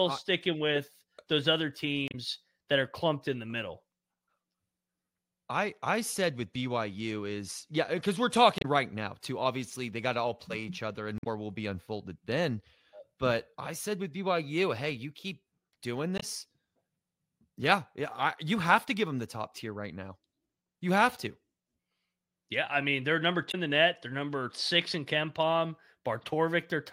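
Five blips of damaged data in a compressed stream, at 2.08, 8.58, 11.17, 16.16 and 23.48 s: corrupt frames knock the decoder out of sync while it hunts for the next header.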